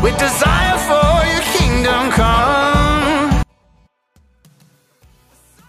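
From 3.43 s to the end, one stereo channel has likely been inverted in polarity, so content common to both sides cancels when they are summed to mono. The level drops by about 38 dB, leaving only a faint residue of what differs between channels.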